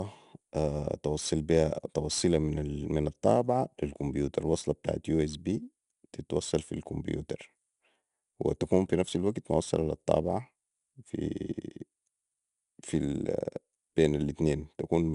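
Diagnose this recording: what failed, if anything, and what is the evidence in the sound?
The codec stage failed: the speech went through 4-bit ADPCM compression, with the damage plainly audible throughout. A gritty hiss rides on every loud syllable, and nothing remains above 10.6 kHz, which fits roughly 89 kbps at a low sample rate. Coarse adaptive prediction steps cause the hiss.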